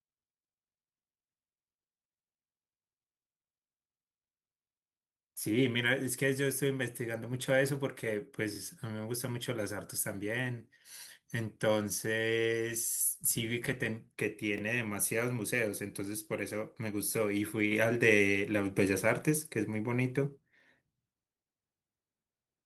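At 8.56 to 8.58 s and again at 14.58 to 14.61 s there are overlapping chunks. The audio appears to have been processed in 6-second blocks, each starting about 25 ms before the previous one ended, so that slice plays twice and is heard as a brief stutter.

At 17.72 s a sudden gain jump raises the level by about 6 dB, with the background noise rising together with the speech and holding there to the end. The likely cause is a gain setting or bit shift applied instantly, without a ramp.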